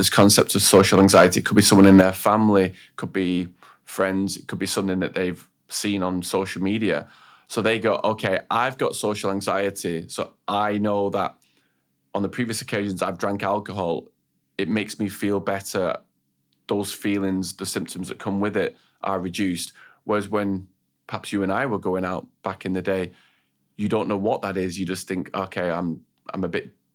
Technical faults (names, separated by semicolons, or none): microphone overload; microphone volume stepped down